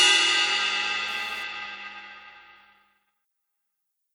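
From 0.92 s to 1.43 s a hard, raspy buzz cuts in, sitting about 23 dB below the sound and unrelated to it, pitched at a 216.7 Hz repetition with a dense stack of harmonics above it. This is GSM phone buzz. A nearby 2G handset was transmitting in 217-per-second bursts during a data transfer, and the audio circuitry rectified those radio pulses into audible clicks, which is why the buzz appears only briefly.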